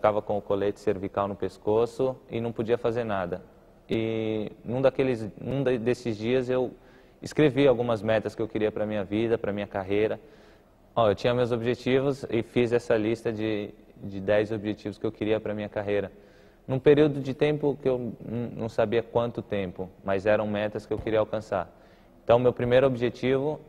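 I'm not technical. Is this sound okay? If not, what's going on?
No. There are two tiny glitches called a repeated buffer, at 3.93 s and 5.51 s. New audio arrived late, so the player replayed its last small chunk. At 3.93 s it repeats twice, at 5.51 s once. The chunks are very short, so each glitch sounds like a click or brief buzz.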